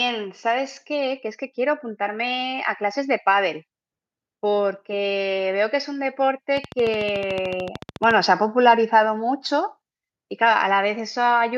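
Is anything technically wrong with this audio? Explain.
Yes. From 0.42 to 3.2 s there is automatic gain rising. The gain control judged the input too quiet and lifted it by about 6 dB. Speech and background noise swell together over nearly three seconds, so the room seems to creep closer.

From 6.57 to 8.12 s a train of clicks sits over the speech. About twenty near-identical pulses arrive at a regular 13.7 per second, peaking roughly 10 dB above the signal. They tick through pauses too. Interference from nearby equipment is the likely cause.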